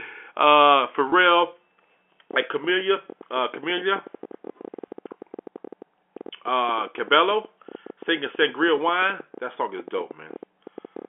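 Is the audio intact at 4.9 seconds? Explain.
No. A packet loss with pitch repetition occupies 4.88 to 4.90 s. The receiver fills the 20 ms gap by repeating the last pitch period, giving a brief held, buzzy tone. A train of clicks also runs from 2.31 to 11.06 s. These are irregular pops at about 11.7 per second, peaking about 5 dB above the signal, likely from interference or a faulty connection.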